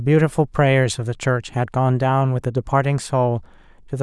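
Nothing goes wrong anywhere in this bit of speech, so there's no fault to point to at any moment.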